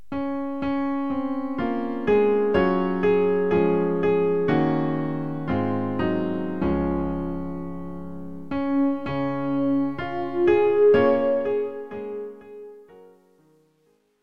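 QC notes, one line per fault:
11.09–14.23 s: truncation distortion on a fade. The fade-out from about 11 s turns gritty as the level drops. A gain stage without dither keeps too few bits, which fits roughly 11-bit resolution, so the waveform collapses into coarse steps, worst from 12.53 s.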